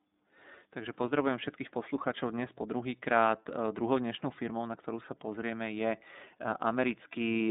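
From start to finish the speech passes through the iLBC codec. Nothing above 3.8 kHz survives, and the line band runs roughly 200 Hz to 3.7 kHz. Each frame is coded on its own, which fits 30 ms frames at 13.33 kbps. The result sounds plainly rough and synthetic.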